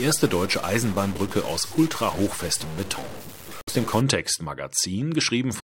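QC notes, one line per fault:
0.00 to 4.01 s, stuck bit: distortion rides on the speech for the first four seconds, and the gaps between phrases don't go quiet but fill with a gritty noise floor. That pattern points to one data bit likely held fixed at 0 or 1 by a broken line or converter. About half the samples land off by that bit's weight as the waveform moves, and quiet passages flip around it, so silence turns into noise.
3.59 to 3.69 s and 5.59 to 5.64 s, damaged data in a compressed stream: two short glitches, the first just under 0.1 s long inside the distorted stretch, the second right at the very end of the clip. Corrupted bytes in the encoded stream make the decoder misread those frames and lose sync. It spits out garbage while it hunts for the next valid frame header.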